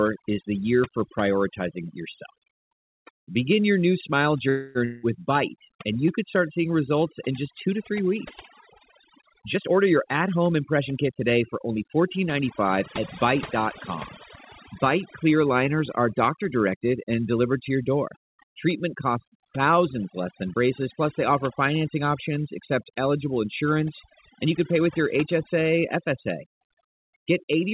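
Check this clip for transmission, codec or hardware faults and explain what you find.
Yes, there are faults. The speech is band-limited with nothing above 4 kHz, which fits a 64 kbps G.711 mu-law call path.

Overdone noise removal runs throughout. Bands near the noise floor are cut hard. The background drops and breaks up into twinkling specks.

A call audio freeze follows "your new smile", from 4.49 to 4.80 s. Packets were likely delayed and the buffer ran dry. About 259 ms is filled with fading buzz, then speech resumes intact.

A long network dropout comes right after, from 4.85 to 5.06 s. The last sound is continued as a fading buzz. Speech then returns with about 180 ms missing.

A jitter buffer speed-up runs from 9.41 to 11.78 s. The receiver cut short pitch-period pieces to shed about a third of a second of delay. Speech runs 11% faster at unchanged pitch and sounds hurried.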